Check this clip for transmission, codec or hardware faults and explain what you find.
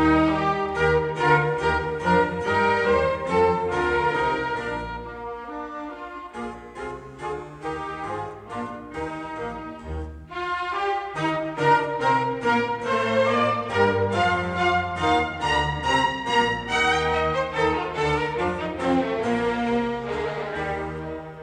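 Nothing stood out on listening that would point to a transmission, codec or hardware problem in this recording.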